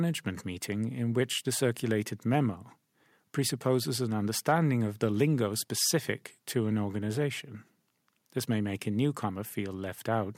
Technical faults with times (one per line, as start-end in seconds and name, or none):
none